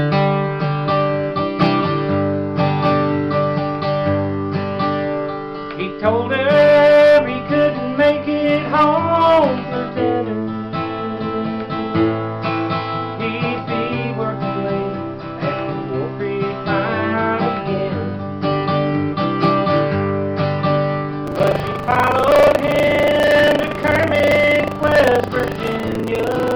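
From 21.24 s to the end at 26.55 s, buffer tearing sets in: the writer and the hardware reader of the ring buffer have slipped, so roughly a fifth of each period replays audio from about 70 ms earlier, hard-joined on both sides, producing a steady robotic rattle at 25 Hz.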